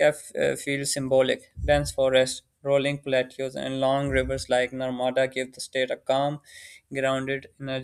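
No technical faults can be heard anywhere in the recording.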